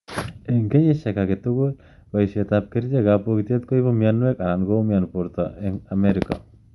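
Throughout, the speech sounds breathy and grainy, with nothing above 11.5 kHz. That's likely Bluetooth LC3 compression, with noise-filled upper bands pointing to roughly 48 kbps.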